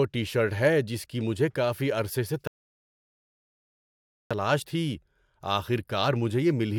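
Speech clip with a rebuffering stall: after "مجھے کافی عرصے سے" the sound cuts to silence at 2.47 s and resumes at 4.31 s, adding 1.83 s. Unlike a dropout, it picks up exactly where it stopped, with nothing skipped, because playback paused awaiting data.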